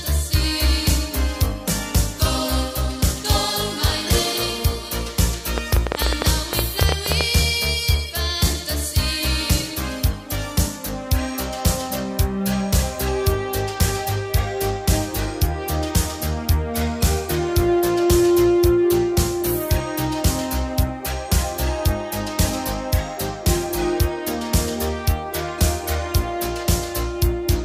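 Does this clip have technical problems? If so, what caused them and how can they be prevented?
Yes, there's a train of clicks from 5.58 to 7.22 s: around twenty similar pops at an uneven pace, averaging 11.7 per second and peaking roughly 20 dB above the audio. That's likely interference from nearby gear or a faulty connection or power supply. Keep cables away from noisy equipment and give the equipment a stable, dedicated connection.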